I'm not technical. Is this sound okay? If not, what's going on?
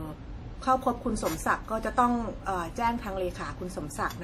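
No. Transcoding between lossy codecs runs through the whole clip, from start to finish. The speech carries two different kinds of compression damage at once, the likely result of being squeezed by an MP3 encoder and then re-squeezed by a WMA encoder. The second encoder wastes effort preserving the first one's artefacts, then adds its own, so both kinds of damage are heard together.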